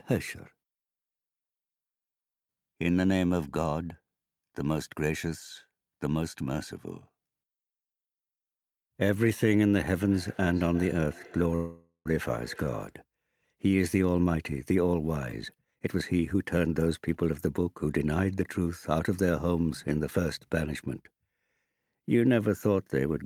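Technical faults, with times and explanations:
10.0–12.99 s, feedback echo between two devices: the sound returns at a steady interval of roughly 0.4 s, each repeat thinner and more ringing than the last, peaking at about 22 dB below the main level. A second device in the same room is playing the call aloud, and the first device's microphone picks that playback up and sends it back. Its echo canceller only removes what its own loudspeaker plays, so the returning copy passes through.
11.55–12.07 s, call audio freeze: the sound stalls for about half a second. The last moment is drawn out as a fading buzz or hiss that ends in roughly 0.1 s of silence, and then the audio resumes exactly where it stopped, with nothing skipped. This likely comes from packets held up in transit that emptied the jitter buffer, so the receiver filled the wait. The inserted gap pushes everything after it about 0.5 s later.
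15.20–17.33 s, jitter buffer speed-up: the sound runs hurried, at about 124% of normal speed, while the pitch stays unchanged. The buffer held more audio than it aims for. To bring the delay back down, the receiver repeatedly cut out short slices a pitch period or so long. Across this stretch roughly half a second of material is removed.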